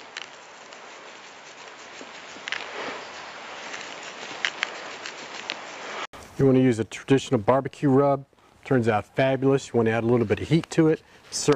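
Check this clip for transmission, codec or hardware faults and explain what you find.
One fault is present. From the start to 6.13 s, the sound comes through a narrower, duller path. Nothing reaches above 7.6 kHz. A faint background noise sits well beneath the signal, and the level is a few decibels different from later. At 6.13 s there is a gap of 80 ms, and then the top end opens up and the noise changes. This is most likely an input switched to a poorer device, such as a secondary microphone or a headset call profile, before the system moved back to the better input.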